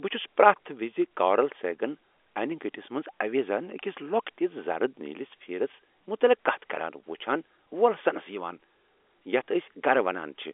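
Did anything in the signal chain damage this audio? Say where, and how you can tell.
No, nothing in the chain damaged this speech; it just has the narrow band of an ordinary G.711 phone line, roughly 300 Hz to 3.5 kHz, which is how that call path normally sounds.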